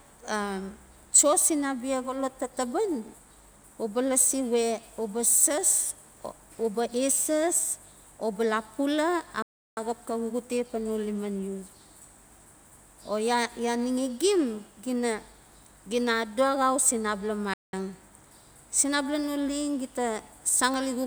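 At 9.42 s and 17.53 s the speech cuts to silence for 0.35 s and 0.19 s, then resumes: playback stalls, likely from the player running short of buffered data.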